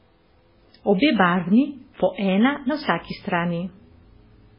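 A starved encoder, likely MP3 compression at a very low bitrate around 16 kbps, cuts everything above 5.3 kHz throughout, leaving the speech dull, watery and swirly.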